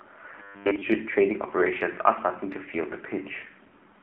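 Throughout, the speech has passed through the AMR narrowband mobile codec, which models the vocal tract and excites it with a few pulses per subframe. At the low rate it sounds like, around 7.4 kbps, the model's coarseness is plainly audible as a buzzy, synthetic edge on the voice. The line band runs only from about 250 Hz to 3.4 kHz, so the low body and all the upper air are missing.

From 0.40 to 0.83 s the sound turns robotic, as if from repeated short buffers. The likely cause is playback running short of fresh audio and filling the gaps by looping the last few milliseconds. The repeats impose a rigid 100 Hz buzz, which fits a buffer of about 10 ms being replayed. For most of that stretch the voice becomes a metallic drone that only loosely tracks the speech.

At 3.68 to 3.73 s, lost AMR speech frames appear. Corrupted data failed its checks, and the decoder bridged the gap by reusing its last good pitch and vocal-tract settings at reduced gain. 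The gap is 40 ms, which points to two consecutive frames. It is heard as a short smeared warble and dip in level, with the sound returning weak or rough for a moment.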